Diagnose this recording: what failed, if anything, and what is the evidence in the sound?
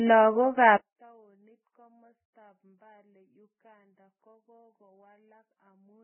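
Codec stage: the whole clip is hissy and grainy with nothing above 3.1 kHz, likely heavy Vorbis compression at a very low bitrate, around 7 kbps.

Wiring: from 0.77 s to the end, the mono speech drops about 34 dB and nearly vanishes, which points to one channel inverted cancelling the shared centre.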